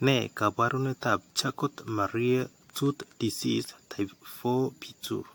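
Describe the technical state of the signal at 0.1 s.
At 0.1 s you're already hearing generation loss, and it doesn't let up through the whole clip. The speech has a swirly, smeared, hollow quality, with consonant attacks blurred more than a single AAC-LC pass at around 100 kbit/s would explain, and nothing above 19.2 kHz. The likely cause is the audio being decoded and re-encoded roughly seven times, each pass landing on a fresh frame grid so quantisation noise stacks up.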